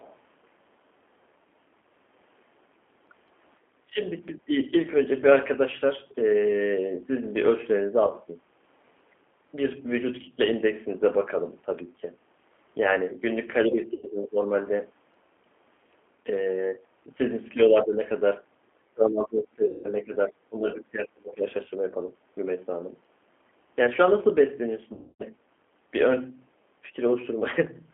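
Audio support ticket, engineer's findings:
G.729 codec, whole call: audio band-limited to about 250 Hz to 3.4 kHz, with plainly audible roughness and a synthetic edge. On a spectrogram, nothing above about 3.4 kHz; harmonics look smeared and grainy. Mechanism: an 8 kbit/s G.729A coder rebuilds each 10 ms frame from a vocal tract filter, pitch predictor and a few pulses, so fine spectral detail is lost.

Other side's voice leaking through, 0.00 to 0.16 s: faint second voice at clip start, about 30 dB under the main talker. Spectrogram shows a weak, thin trace at clip start. Likely cause: far-end loudspeaker audio reaching the microphone and escaping the echo canceller. Too short and low to dominate.

Speech suppressed in double talk, five spots:
3.84 to 4.01 s and 4.31 to 4.58 s, level dips up to about 20 dB.
13.66 to 14.48 s and 17.52 to 17.98 s, shallower dips near 10 dB.
18.82 to 21.46 s, worst, roughly 2 s affected, drops near 30 dB.
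Waveform envelope caves in. Likely cause: echo canceller ducking the near talker while the far side also spoke.

VoIP packet loss concealed by the speech codec:
8.07 to 8.13 s, 30 ms lost.
13.94 to 14.06 s, 90 ms lost, inside the 13.66 s dip.
19.66 to 19.87 s, 180 ms lost, within the long suppression.
24.93 to 25.24 s, 270 ms lost, longest: stretched and fading out.
Spectrogram shows frozen, repeated harmonic bands decaying, then weak recovery; waveform shows periodic buzz tapering. Decoder extrapolates last pitch and filter while lowering gain.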